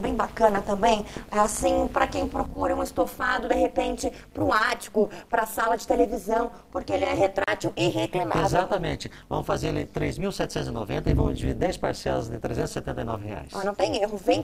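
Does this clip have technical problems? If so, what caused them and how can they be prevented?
Yes. Throughout the clip the sound has a harsh, metallic buzz with extra tones around each note, with the level swinging by about 60 dB around 200 times a second. This is overlap-add ripple: the audio was split into windowed frames and rejoined with an overlap whose windows do not add up to a steady gain, so loudness dips deeply once per frame at the frame rate. To prevent it, choose window shape and hop size that satisfy the constant-overlap-add condition, or normalise by the summed window.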